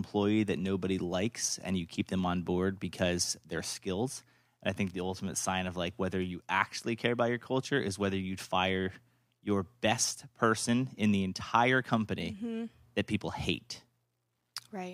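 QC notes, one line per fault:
No faults found in this recording.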